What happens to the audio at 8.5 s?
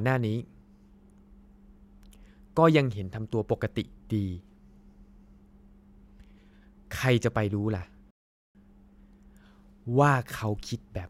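At 8.5 s the speech is just coming out of a rebuffering stall that began at 8.11 s and ends at 8.55 s. The player ran short of downloaded audio, so it halted and played silence for 0.44 s until more data arrived, then picked up at exactly the point where it had paused. That separates it from a dropout: no speech is missing across the gap, and the clip simply runs 0.44 s longer.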